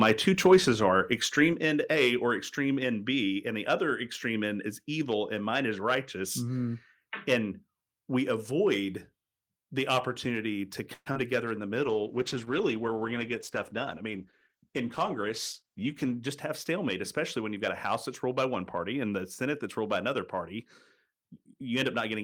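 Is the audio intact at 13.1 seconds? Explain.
No. At 13.1 s the speech sits inside a call bitrate drop running from 11.83 to 16.22 s, where the encoder's budget falls from 32 kbps to 13 kbps after the call's bandwidth estimate collapsed. With fewer bits the codec quantises the speech more coarsely, so it turns rough and watery. Unlike packet loss, nothing drops out or stutters: the audio stays continuous and degraded throughout, then clears when the bitrate recovers.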